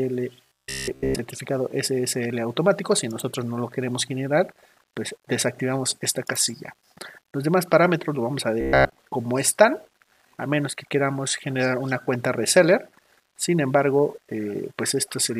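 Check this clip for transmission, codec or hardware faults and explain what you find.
Two passages show robotic sound from repeated short buffers, from 0.46 to 1.19 s and from 8.61 to 8.99 s. Both carry a rigid metallic buzz at 66.7 Hz, riding over audio that only loosely follows its original shape. The likely cause is new data arriving too seldom, so the playback side loops the last fragment, which fits a 15 ms buffer, while most of the real audio in those stretches is skipped.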